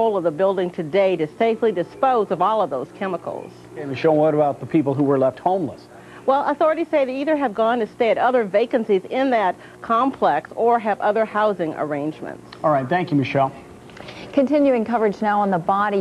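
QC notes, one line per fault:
No faults found. Nothing in the audio calls for a QC entry.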